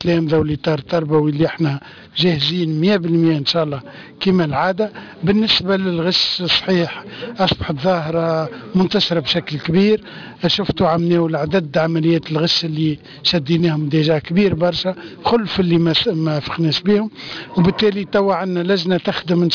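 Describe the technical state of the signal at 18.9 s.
At 18.9 s you're still hearing the aliasing that runs through the whole clip. Content above about 5.5 kHz folds back down as unrelated tones, pointing to a resample to around 11 kHz with no filtering first. It sits roughly 10 dB under the signal, giving a gritty, metallic edge.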